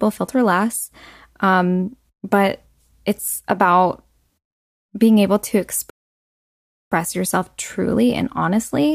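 At 5.9 s the speech just drops out and stays silent until about 6.92 s, a gap of roughly 1.02 s, then picks back up. That's a playback stall: the output went dead in mid-flow rather than fading or glitching. The likely cause is the player running dry of buffered data, or its thread getting blocked, so nothing reached the output until it recovered and carried on.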